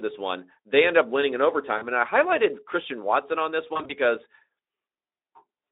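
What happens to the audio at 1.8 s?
At 1.77 s the sound breaks up, and packets return at 1.86 s, though the voice may stay weak or distorted for tens of milliseconds after. This is VoIP packet loss concealed by the speech codec. About 40 ms of audio went missing, which fits two lost 20 ms frames. The decoder filled the gap by repeating its last pitch and filter shape at falling gain. That gives a short, smeared buzzy tone or coloured noise that fades. The narrowband Speex sound around it carries the effect through a thin, telephone-like band.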